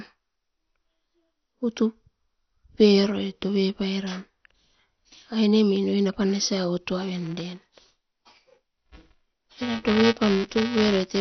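The clip is speech. From start to end it sounds dull and band-limited, with nothing above 6.2 kHz, and has a heavy gurgling, granular texture as the upper detail flickers in and out. That points to MP2 compression as the likely cause, with the 32 sub-bands starved of bits so the top bands are dropped and the remaining ones are coarsely quantised, which fits a low rate around 48 kbps. From 7.14 s to the end, buffer tearing adds a robotic buzz at 345 Hz that rides on the signal. The writing program and the playback hardware have slipped relative to each other, so a small slice of every period, a few percent, is replayed from about 5 ms earlier, with a hard splice at each edge. That buzz rate fits a 128-sample buffer.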